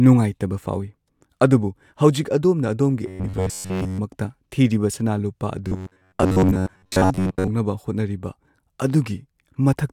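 Robotic sound from repeated short buffers appears from 3.06 to 4.01 s and again from 5.64 to 7.49 s: the speech becomes a rigid metallic buzz near 94 Hz. This is likely from audio arriving too seldom, so a chunk of about 10.7 ms is replayed in place of most of the real signal.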